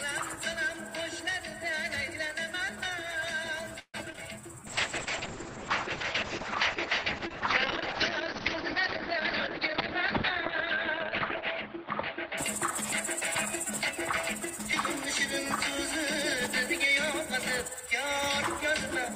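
From 3.79 to 4.19 s there is repeated packet loss with a robotic sound. Five gaps fall in under half a second, the longest 145 ms. About 180 ms is patched by stretching the last sound, and about 100 ms is simply gone. On a spectrogram the span shows smeared, repeated harmonic bands broken by dropouts, and the waveform is chopped into uneven blocks.

A jitter buffer slow-down follows from 4.46 to 5.47 s. The receiver repeats single pitch periods to rebuild its reserve, adding 71 ms, so the sound plays at 94% speed with unchanged pitch. It drags slightly. The waveform shows near-identical cycles repeated side by side.

From 4.67 to 13.17 s a call bitrate drop takes the stream from 32 to 6 kbps, which holds for about 6 s. Audio bandwidth falls from 20 kHz to 6 kHz, so the sound turns muffled and watery. The spectrogram shows a hard ceiling at 6 kHz with coarse, patchy detail below it.

Three jitter buffer speed-ups trim the excess delay by cutting out short pitch-period pieces while the pitch stays the same. 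The first, from 9.16 to 9.61 s, runs at 107% and removes some 40 ms. The second, from 10.74 to 12.60 s, runs at 102% and removes around 50 ms. The third, from 16.88 to 17.88 s, runs at 103% and removes some 40 ms. The first sounds briefly hurried, and the waveform shows slightly compressed cycle spacing.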